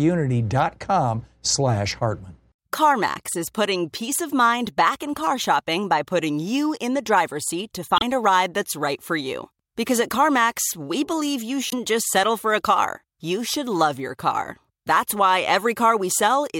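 Damaged data in a compressed stream strikes twice in this speech, at 7.96–8.02 s and 11.69–11.73 s. Corrupted bytes make the decoder misread frames and lose sync while hunting for the next header, leaving each as a short glitch.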